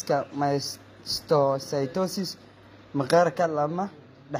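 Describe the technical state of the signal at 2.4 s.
At 2.4 s the speech carries HE-AAC compression damage, present throughout the clip rather than at that moment alone. The lower spectrum sounds coded directly, while the treble is likely rebuilt by spectral band replication, copied up from lower bands and shaped only coarsely, which fits a low bitrate around 24 kbps. The rebuilt harmonics don't align with the originals, so sibilants sound gritty and metallic, and nothing remains above 15.5 kHz.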